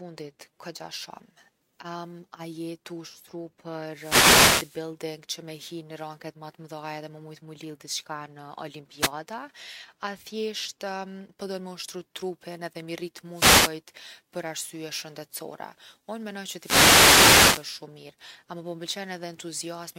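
At 3.84 to 4.88 s, 8.98 to 9.12 s, 13.30 to 13.77 s and 16.54 to 17.71 s the speech is hit by a wireless microphone noise hit. In each, the analogue FM radio link fades as reflected paths cancel the direct signal, and the receiver's own noise rises over the voice. It is heard as a swish or burst of static, brief at 9 s and lasting over a second at 4 and 17 s.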